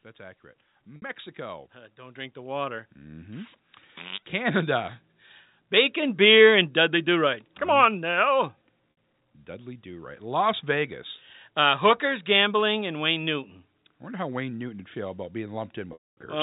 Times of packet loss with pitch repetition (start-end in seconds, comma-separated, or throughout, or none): 0.96-1.02, 8.91-8.97, 15.93-16.17